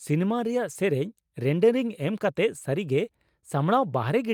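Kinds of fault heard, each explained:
No technical fault can be heard in this speech recording. There is nothing here to list under any fault heading.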